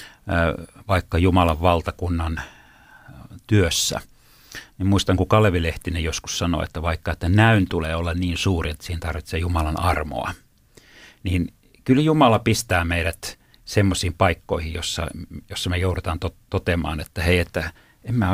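No technical faults detected.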